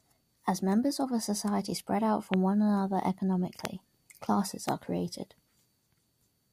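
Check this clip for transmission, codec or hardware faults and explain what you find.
Three loud pops interrupt the speech, at 2.34–2.36 s, 3.65–3.67 s and 4.69–4.71 s. Each is a single sharp click about 20 dB above the speech, which carries on underneath. The likely cause is a voltage spike from a switch, plug or static discharge, shaped by the circuitry that follows it. On a waveform each pop is a tall, narrow spike. On a spectrogram it is a thin vertical stripe spanning the full frequency range.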